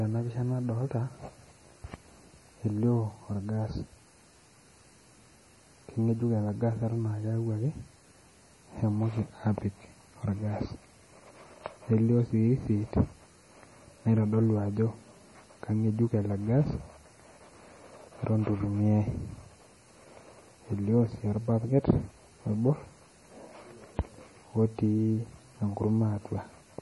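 Throughout the speech, the treble stops dead at 11.4 kHz, and the heavy damage is likely MP3 compression, at a low bitrate around 32 kbps. Short of bits, the encoder discards everything above that line and drops quieter frequency components, which flicker in and out between frames. The voice sounds watery and swirly, with metallic chirps on s sounds and smeared consonant attacks. A spectrogram shows a flat ceiling at 11.4 kHz and speckled, patchy holes below it.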